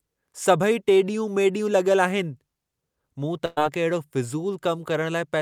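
At 3.45 s the speech suddenly stops progressing: the last sound is stretched into a brief held buzz or hiss that fades over roughly a tenth of a second, and at 3.59 s the talker resumes slightly further along, with about 120 ms of speech gone. This is a burst of packet loss. Several consecutive packets never arrived in time, and the receiver filled the roughly 110 ms hole by extending and attenuating the last audio it had, so there is no silent dropout.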